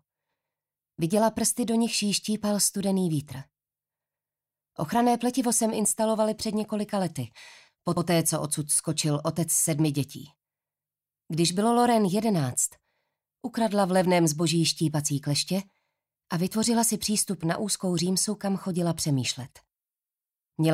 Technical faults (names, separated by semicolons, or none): repeated frames